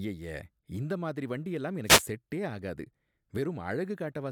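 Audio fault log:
1.84–2.04 s, wireless microphone noise hit: after "இந்த மாதிரி வண்டியெல்லாம்", a brief burst of static as the FM radio link fades, receiver noise rising until "செட்டே ஆகாது".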